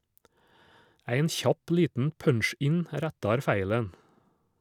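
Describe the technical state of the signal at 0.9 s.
At 0.9 s the speech signal is intact, with no technical fault present at that moment.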